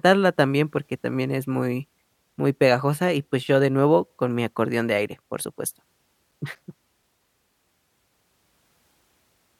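From 6.08 to 7.26 s the speech carries CD scratch ticks: six short ticks, none longer than a few milliseconds, at about five per second. A blemish on the disc defeats error correction once per revolution, so the player conceals samples. Their steady spacing separates them from random vinyl or digital clicks.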